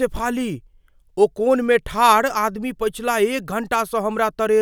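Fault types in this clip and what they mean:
Listening through the speech, nothing stood out as a fault of any kind.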